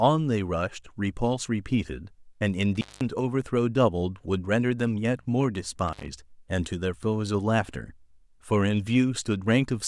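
Intermittent contact occurs at 2.75 to 3.01 s and again at 5.88 to 6.08 s in this speech clip. A loose cable or plug briefly opens the signal path, so the sound drops out for about 0.2 s in the first event and 0.1 s in the second. Each gap is bracketed by crackle as the contact breaks and remakes, and while the line is open a faint hiss remains.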